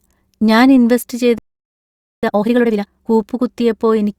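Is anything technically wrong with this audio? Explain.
Yes, the speech has a playback stall followed by time-compressed catch-up.

Just after "ഞാൻ ഇൻവെസ്റ്റ്", from 1.38 to 2.23 s, the audio cuts out mid-flow for about 0.85 s, likely because the player ran short of data or its thread was blocked. The waveform drops to a flat line and the spectrogram shows an empty vertical band.

From 2.23 to 3.07 s, time-compressed catch-up clears the backlog by removing short slices and cross-fading the joins, so the speech plays at twice its normal rate without any shift in pitch. It sounds rushed. The spectrogram shows syllables packed tightly together.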